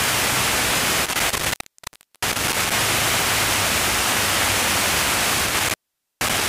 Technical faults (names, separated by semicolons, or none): intermittent contact